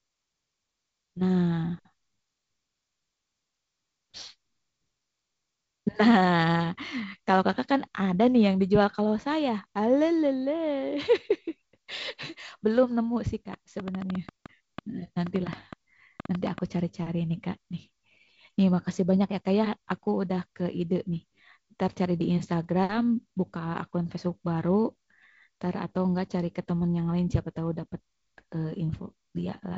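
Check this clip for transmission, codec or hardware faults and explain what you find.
One fault stands out: a train of clicks from 13.54 to 16.59 s. Across those three seconds, about twenty sharp ticks sit on top of the speech at an uneven rate, averaging 6.2 per second. They peak roughly 10 dB above the speech. The ticks share much the same shape, which points to one repeating source injecting brief pulses. That source is likely electrical interference from nearby equipment or a faulty connection or power supply. This happens at the hardware stage, separate from the G.722 wideband coding. The coding is audible as a cutoff near 7.7 kHz and a slightly grainier low band, consistent with 48 kbit/s.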